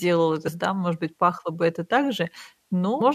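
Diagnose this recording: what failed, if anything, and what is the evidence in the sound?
The failure sits at the codec stage: damaged data in a compressed stream, heard as two brief glitches in the speech at 0.47 to 0.49 s and 3.00 to 3.02 s. Bytes inside the encoded frames there are wrong, so the decoder misreads them and loses sync until it finds the next valid frame header. On a spectrogram each event is a thin vertical break in the harmonic bands, and the waveform shows a short, jagged discontinuity.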